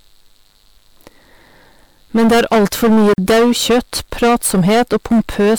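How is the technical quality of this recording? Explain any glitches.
The technical quality is poor. Two faults are audible.

Hard clipping runs through the whole speech clip. The level is driven about 16 dB past full scale, so roughly a sixth of samples are flattened. This gives harsh fuzz.

A gap at a join of encoded pieces opens from 3.14 to 3.18 s, just after "er alt for mye". Separately encoded pieces kept their padding, leaving a 43 ms silence before the speech resumes.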